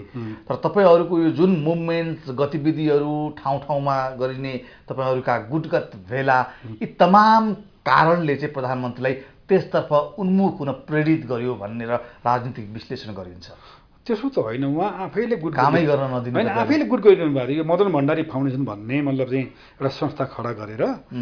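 No technical fault can be heard anywhere in the audio. Nothing in it calls for correction.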